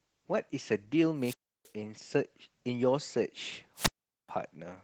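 Opus voice compression runs through the whole clip: the speech is coded at a low bitrate, which sounds consistent with about 16 kbps in hybrid mode, with SILK's linear-prediction coder handling the lower band and CELT the range above 8 kHz. Coarse excitation coding leaves the speech plainly muffled, hoarse and slightly robotic. A wireless microphone squelch dropout occurs from 1.17 to 1.72 s and again from 3.75 to 4.30 s. Each time the FM radio signal fades, hiss rises, and the receiver's squelch mutes the output for about 0.32 s and then 0.42 s, leaving near silence before the speech returns.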